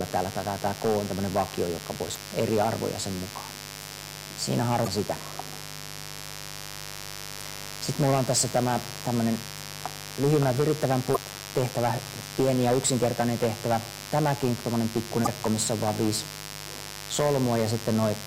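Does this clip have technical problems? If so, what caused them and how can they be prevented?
Yes. A steady, raspy mains buzz runs through the whole clip, fairly prominent at roughly 15 dB below the sound itself. It is built on 50 Hz with a dense stack of harmonics reaching into the kilohertz range, which is why it rasps rather than hums. A dimmer, rectifier or unshielded cable injects a sharp spike twice in every mains cycle. Preventing it means keeping dimmers and switching supplies off the audio circuit and using balanced, properly shielded and grounded connections.

Four short chirps or blips of damaged data in a compressed stream occur at 2.13 s, 4.84 s, 11.13 s and 15.23 s, each lasting about 40 ms. At these points corrupted bytes in the encoded file or stream threw the decoder off. It misread the affected frames, lost sync and jumped to the next valid frame header. Preventing it means transferring and storing files with checksums and using a reliable transport that retransmits or detects corrupted packets.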